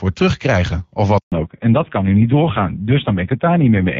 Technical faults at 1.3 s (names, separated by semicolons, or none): handover gap; fallback to narrowband